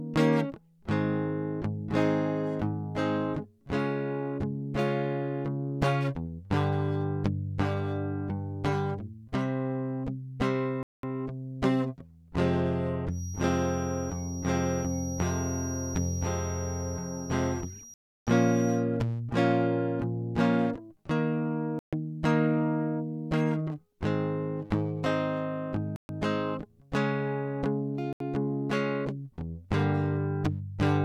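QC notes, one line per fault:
10.83 to 28.20 s, Bluetooth stall: the music cuts to complete silence at 10.83, 17.94, 21.79, 25.96 and 28.13 s, for 0.20, 0.33, 0.14, 0.13 and 0.08 s, then carries on. This is likely the headphone buffer running dry while delayed packets were resent. These are clean gaps, not clicks or smeared codec glitches.
13.07 to 18.86 s, feedback whistle: a thin, steady tone near 5.7 kHz sits roughly 15 dB below the music and swells and fades slowly in level. It likely comes from a loudspeaker-to-microphone loop held just short of feedback. Unlike a full howl, it never builds.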